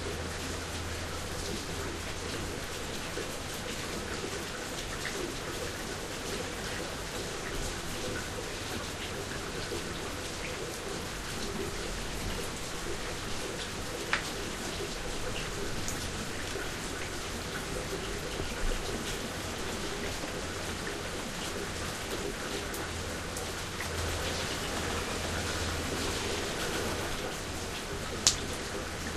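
From 23.98 to 27.16 s, a doubled audio track appears. A second full-band copy trails the original by roughly 150 ms, at about the same level. It has no decay or room colour. It cuts in and out abruptly. An edit holding two misaligned copies is the likely cause.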